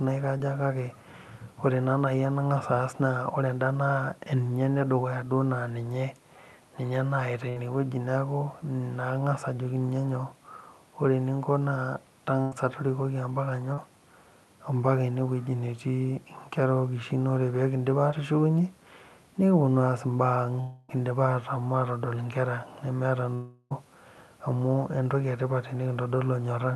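At 0.37–0.41 s, short concealed packet loss leaves a brief smear where about 20 ms of audio never arrived and the receiver extended the preceding sound. On a spectrogram the harmonics run unnaturally smooth for that instant. The waveform shows no break.

At 7.49–7.58 s and 12.42–12.54 s, a burst of packet loss removes about 60 ms and then 100 ms. Each gap is bridged by filler that fades before the speech resumes further on. The spectrogram shows frozen, dimming bands, and the waveform shows a tapering envelope.

Short concealed packet loss returns at 13.74–13.79 s (about 40 ms) and at 18.11–18.14 s (about 20 ms), each a quick wobble.

At 20.60–20.91 s and 23.35–23.72 s there are longer gaps, most likely a long network dropout. About 280 ms and then 360 ms are lost. The filler fades, and the second gap ends with roughly 10 ms of flat waveform. Across the whole clip, energy stops near 12 kHz, consistent with Opus at 48 kbps.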